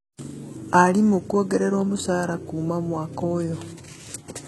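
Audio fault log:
throughout, HE-AAC compression: heavily damaged treble that sounds bright but synthetic, with gritty, lispy s sounds, likely from HE-AAC copying lower bands upward at a bitrate near 16 kbps. A spectrogram shows smeared, repeated-looking upper bands with misaligned harmonics and a hard ceiling at 11.8 kHz.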